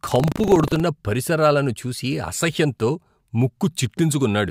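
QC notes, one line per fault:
0.0–0.8 s, buffer tearing: a rattling, robotic buzz at 25 Hz rides on the speech, meaning the writer and reader of the playback buffer cross once every 40 ms. A small slice of each period, about 7%, replays audio from the previous lap, roughly 70 ms stale, with hard splices at both edges. On a waveform these show as regular discontinuities every 40 ms; on a spectrogram, as evenly spaced vertical broadband clicks across the voiced energy.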